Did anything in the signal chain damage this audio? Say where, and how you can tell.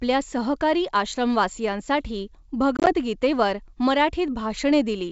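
Yes, packet loss on an ADPCM call, at the network stage, from 2.77 to 2.93 s, right after "सहकारी आश्रमवासियांसाठी". About 60 ms of audio is missing, scattered over roughly 100 ms in runs no longer than 20 ms. That fits around seven small packets. The waveform shows hard-edged flat gaps. On the spectrogram these are blank vertical slots. Each hole knocks the decoder's predictor and step size out of step with the sender's, so the audio comes back slightly distorted until the two realign.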